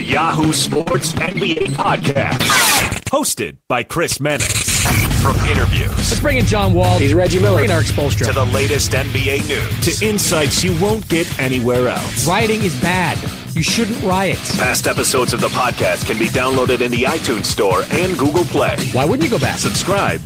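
From 0.73 to 2.41 s the sound turns choppy, with short pieces missing. This is repeated packet loss: holes, the longest about 48 ms, recur every few tens of milliseconds, each patched by extending the preceding sound, concealing roughly a quarter of the stretch.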